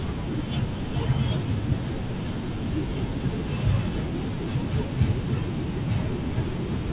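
No technical faults in this speech.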